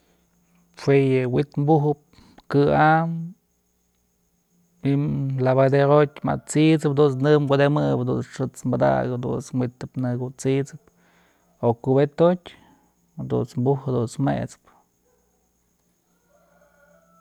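No technical faults can be heard in this speech recording.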